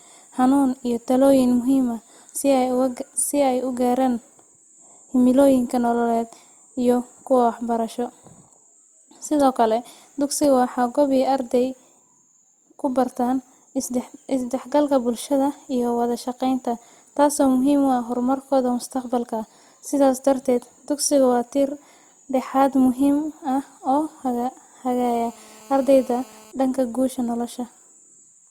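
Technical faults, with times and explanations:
25.05–26.52 s: GSM phone buzz, a steady, harsh 217 Hz buzz about 27 dB below the speech before "dhanka guusha", from a nearby 2G phone's call bursts being rectified by the audio circuitry.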